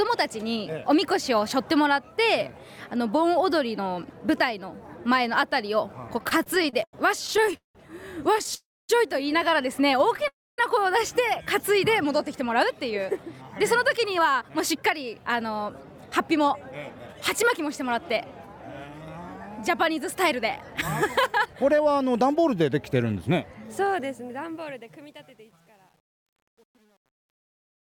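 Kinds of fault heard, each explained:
Repeated stalls (stutter): Late-arriving packets kept emptying the jitter buffer. Between 6.17 and 7.76 s the sound stalls 18 times, the longest about 0.18 s, and drags.
Call audio freeze: Held-up packets likely emptied the jitter buffer. At 8.55 and 10.28 s the last sound is stretched, then goes silent for 0.25 s before continuing.
Jitter buffer speed-up: To cut excess buffered delay, pitch-period slices were removed. From 12.05 to 22.69 s the sound runs 6% fast at unchanged pitch, sounding hurried.
Truncation distortion on a fade: A fade stage drops low bits without dither, which fits 9-bit precision. The fade-out's quiet tail turns gritty, worst from 24.55 s.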